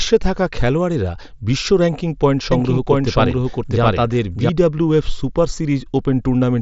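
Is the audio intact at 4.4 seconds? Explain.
No. At 4.4 s you're inside a doubled audio track that runs from 2.52 to 4.50 s. A second full-band copy of the speech sits roughly 700 ms behind the original at about the same level, with no room colour or decay, so it sounds like a flat, out-of-step echo that drops in and out abruptly. It's likely a second capture through a slower path, or an edit leaving two copies overlapped.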